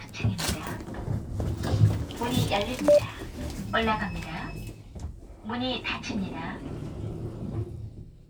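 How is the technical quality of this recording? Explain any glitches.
Three brief clicks mar the recording. Dropped samples at 1.05, 2.00 and 7.13 s: each is likely a loss of well under a millisecond of the stream, so the waveform jumps straight to a later value, producing a single sharp click with nothing audibly missing.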